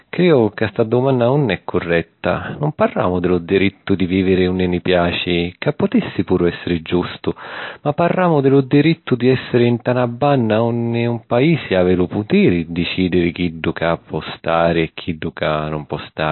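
MP3 compression artefacts run throughout the speech, with nothing above 4.1 kHz, dull muffled treble, and plainly audible watery swirling as weak frequency lines flicker between frames. The likely cause is an MP3 encoder starved of bits, which fits a very low bitrate near 28 kbps.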